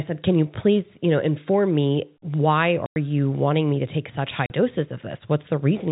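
Hard-edged silent holes cut the speech at 2.86 s for 100 ms and at 4.46 s for 40 ms. This is packet loss filled with silence, with gaps that fit whole 20 ms packets.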